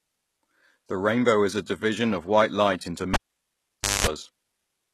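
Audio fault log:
Throughout, HE-AAC compression: The treble sounds bright but synthetic. Sibilants come out gritty and metallic, harmonics in the upper range fail to sit cleanly on the lower ones, and nothing is present above about 12.3 kHz. The likely cause is HE-AAC coding at a very low rate, consistent with roughly 16 kbps. The codec keeps only the lower spectrum and fakes the top by copying lower bands upward under a coarse envelope, so the high end is an invented imitation.
3.14 to 4.07 s, cable pulled and plugged in: Right after "of white light into" a pop cuts the sound to near silence for about 0.88 s. During that gap, a 50 Hz mains buzz lasting about 0.21 s breaks in, and a second pop marks the signal's return. A live cable was pulled and reinserted. The buzz comes from the plug tip touching the socket before the ground and signal contacts seat properly, leaving the input open to hum.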